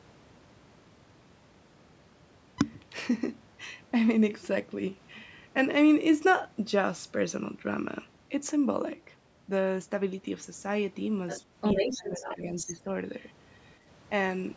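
The echo canceller likely failed to remove all of the far end's loudspeaker sound from the microphone, so the other side's voice leaking through appears, first as a faint scrap well below the talker at 11.28 to 11.41 s, then from 11.61 to 12.72 s at roughly the talker's own level, a second voice running alongside.

Because both sides were talking at once, the canceller likely could not separate its own talker from the echo and turned everything down. This speech suppressed in double talk spans 11.82 to 12.9 s: the talker's voice dips by as much as about 15 dB over roughly 0.7 s in total while the other voice is present.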